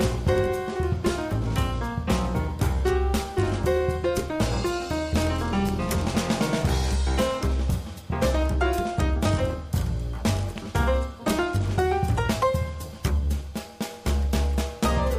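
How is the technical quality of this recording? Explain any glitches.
Two loud pops break the recording, at 5.69 s and 10.58 s. Each is a single sharp click standing roughly 10 dB and 5 dB above the sound, which continues underneath. A sudden voltage spike, likely from a switch, static or a driver glitch, was added to the signal.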